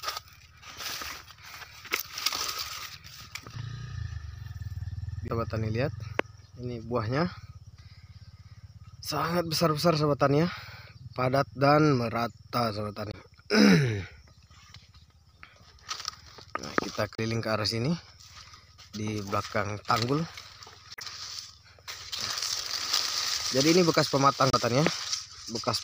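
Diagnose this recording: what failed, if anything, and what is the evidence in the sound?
Brief chirps and blips cut through the audio at 5.27–5.31 s, 13.10–13.15 s, 17.15–17.19 s, 20.94–21.02 s and 24.50–24.55 s. This is damaged data in a compressed stream, at the codec stage: corrupted frames decode wrongly, and the decoder loses sync until it locks onto the next valid frame header.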